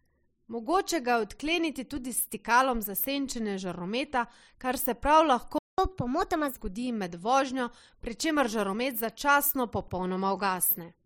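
At 5.58 s the player likely ran short of data or had its thread blocked, causing a playback stall: the speech cuts off mid-flow and the output stays silent for about 0.2 s, until 5.78 s, when sound returns.

From 5.78 s to 6.57 s the player works through its backlog by resampling, a catch-up at higher speed. Speech, starting with "zgodi med vožnjo", runs 1.25 times faster and pitch rises about four semitones, then normal speed resumes.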